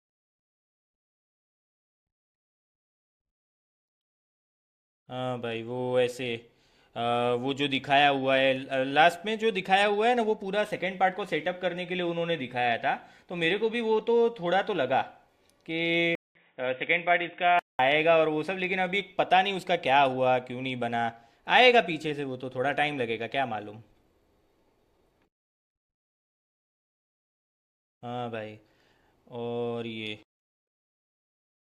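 At 16.15 s the speech drops out for 200 ms, then returns dull and boxy until 17.79 s, likely an input switched to a poorer device. A spectrogram shows everything above 3.8 kHz cut off, with a faint new noise floor, while the waveform's level stays unchanged.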